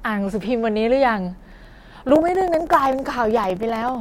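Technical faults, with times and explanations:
1.39–3.95 s periodic USB or driver dropouts: the audio path stalls every 64 ms, losing about 2 ms to silence each time, so the speech ticks steadily.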